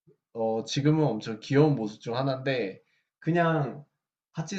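A speech recording with no audible technical faults.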